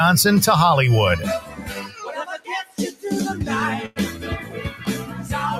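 Throughout, the sound pumps and thins, with held parts and tails sinking while attacks push through, swinging by around 10 dB. A noise suppressor built for speech was left on, treating steady tones and ambience as noise and turning them down.

Between 1.4 and 2.03 s the level sags by about 9 dB, and from 2.38 to 3.04 s it drops harder, by about 15 dB. These are sounds cut by the noise suppressor, which judged those sounds to be noise and pulled them down.

From 3.86 to 3.98 s, the sound hangs for 100 ms before carrying on from where it stopped. This is a short stall from a late packet: the jitter buffer ran dry, and the receiver stretched the last sound until the packet arrived, adding 100 ms of delay but losing nothing.

From 4.70 to 4.85 s, another brief dip of about 8 dB appears as the suppressor again cuts a sound.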